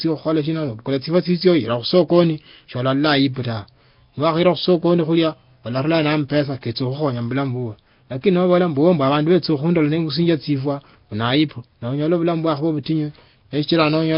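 Throughout the speech, each syllable carries a rough, hissy halo with a smeared, underwater quality, and nothing is heard above 5.3 kHz. The likely cause is heavy Nellymoser compression at a rate that fits about 22 kbps. Starved bands are refilled with noise, giving hiss rather than MP3-style metallic warble.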